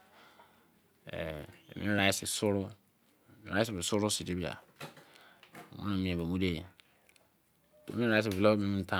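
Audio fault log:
1.99 s dropped buffer (overrun): sound skips a millisecond or two, likely from overwritten samples; a waveform step and a thin vertical spectrogram line.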